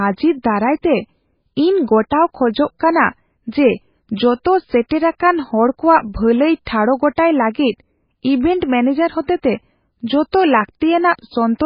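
All the way through, the speech has heavy MP3 compression damage, likely from a very low bitrate around 16 kbps: nothing above 5.1 kHz, and a watery, swirly smear on the sibilants.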